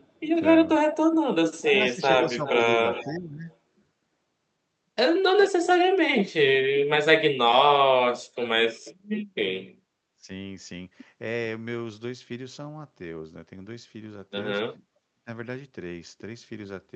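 The speech dips briefly from 0.1 to 0.22 s, then a faint delayed copy of the voice trails it from 0.93 to 1.62 s, lagging by about 0.40 s and sitting about 10 dB below the direct speech. This is echo leak: a loudspeaker's output reached the far-end microphone and was likely not fully cancelled. The same echo returns from 2.39 to 3.54 s and from 5.4 to 6.24 s.

The speech loses level in patches from 1.63 to 3.48 s, then drops sharply, by up to about 40 dB, at 6.79 to 7.05 s, 10.15 to 10.29 s and 14.9 to 15.28 s. This is speech suppressed in double talk, likely because the echo canceller attenuated the talker while both sides spoke. All of it sits within the Opus call path's 8 kHz bandwidth.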